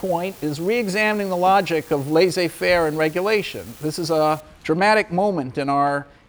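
From the start until about 4.40 s there is a steady, fine crackle or fizz, present even through pauses in the sound. This is an unreliable data bit: one marginal data line flips in random samples, each error adding a same-sized spike of about -32 dBFS.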